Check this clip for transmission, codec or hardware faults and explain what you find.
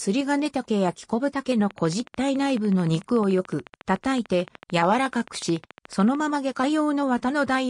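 There's one clear fault: a train of clicks running from about 1.71 s to 6.16 s. It's a steady ticking at 13.7 clicks per second, evenly spaced, so around seventy of them in all, each roughly as loud as the audio itself. Because the clicks look alike and keep strict time, the likely cause is a repeating pulse from nearby equipment or a faulty connection or power supply. You hear it as a mechanical tick riding over the sound, pauses included.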